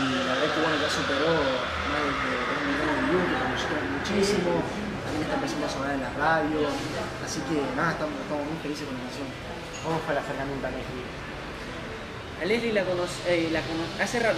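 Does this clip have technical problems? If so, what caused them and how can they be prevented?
No, there are no audible technical faults in this clip, so there is nothing to trace or prevent.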